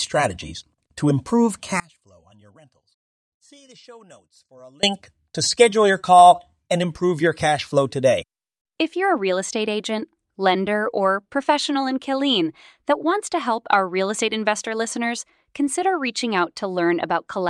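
At 1.80 s the speech drops abruptly into an audio dropout to a faint residue lasting about 3.0 s, until 4.83 s. Instead of silence, the gap holds a faint leak of the signal, roughly 30 dB below its normal level. The likely cause is a brief loss of the feed while the path downstream stayed open. On a waveform the envelope collapses to a thin band with square edges. A spectrogram shows a sudden, dim vertical block, not a tapering fade.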